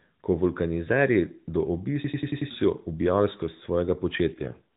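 From 2.04 to 2.51 s a system hang loop repeats one 93 ms slice at 10.8 Hz, which fits a 4096-sample ring buffer, giving a machine-gun stutter. Unlike a dropout, it replays audio exactly rather than falling silent, and about half a second of the real signal is lost.

From 4.34 to 4.62 s an AMR rate drop makes the speech rougher and more synthetic, which points to a fall from 12.2 to 4.75 kbps. Unlike packet loss, there is no gap, and the narrowband ceiling near 4 kHz stays where it was.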